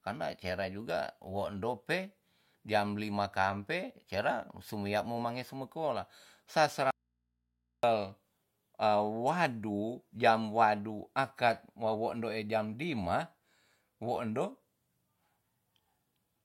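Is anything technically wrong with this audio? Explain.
Yes. An audio dropout to a faint residue runs from 6.91 to 7.83 s, right after "mange sumi kola sa": the speech likely lost its source while the path stayed live, leaving only mains hum far below the speech level.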